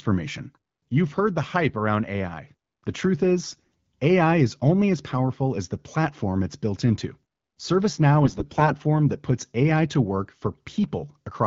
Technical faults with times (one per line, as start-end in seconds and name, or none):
3.43-3.70 AMR bit errors
8.24-8.72 AMR bit errors